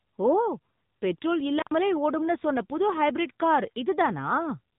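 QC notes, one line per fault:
throughout: AMR narrowband mobile codec. The speech is squeezed into a telephone band with nothing above 3.8 kHz, and the low-bitrate coding, which fits about 8 kbps, leaves a plainly audible buzzy, synthetic edge, because a simple vocal-tract model driven by sparse pulses stands in for the real voice.
1.58–1.71 s: intermittent contact. The sound drops out for about 93 ms, with crackle at both edges as a loose connection opens and then closes again, leaving only faint hiss in the gap before "ஓடும்னு சொன்ன புது ஹைபிரிட்" resumes.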